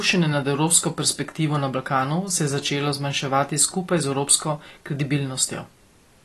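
Throughout the clip, the speech carries plainly audible coding damage, likely from AAC compression. Nothing is heard above 12.1 kHz. That top end has been cut away. The encoder splits the sound into many narrow frequency lines per frame and spends its few bits where hearing is most sensitive. Detail elsewhere is discarded. The damage fits AAC-LC at a low bitrate, around 32 kbps. The speech sounds dull and smeared, with a coarse, processed texture.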